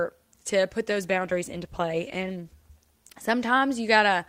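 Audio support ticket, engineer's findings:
Call bitrate drop, 0.87–3.81 s: speech turns rough, watery and muffled, worst for about 1.6 s, then recovers. Encoder starved after the bandwidth estimate fell, which fits a drop from around 64 kbps to about 22 kbps. Coarser coding. Spectrogram: upper band thins or cuts off, harmonics smeared. Waveform envelope largely unchanged.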